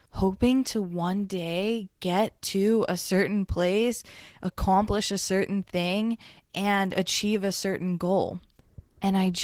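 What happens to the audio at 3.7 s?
At 3.7 s the speech sounds hoarse, grainy and slightly robotic, a plainly audible texture that runs through the whole clip. This is Opus voice compression at a rate that fits about 16 kbps, in hybrid mode. The SILK layer codes the excitation coarsely, and a thin CELT layer covers the band above 8 kHz.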